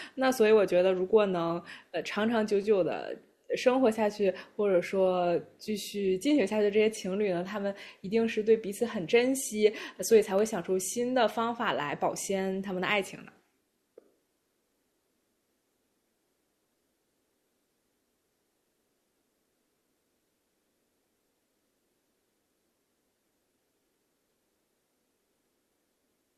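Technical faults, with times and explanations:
10.39 s, electrical switching spike: a nearby switch, motor or static discharge likely arced once, and the audio line picked up that burst of interference. It adds a single sharp snap on top of the speech, peaking around -25 dBFS.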